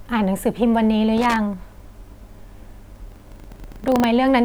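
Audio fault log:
1.18–1.36 s, loose connector crackle: for just under 0.2 s the speech breaks into an irregular, scratchy burst. A worn or dirty contact is making and breaking rapidly, chopping the signal on and off, and any DC on the line turns each break into a pop.
2.92–4.05 s, buffer tearing: a steady robotic rattle at 25 Hz rides on the speech, which fits a 40 ms buffer period. The writer and reader of the ring buffer have drifted, so a few percent of each period replays audio from roughly 70 ms earlier, spliced in with hard joins.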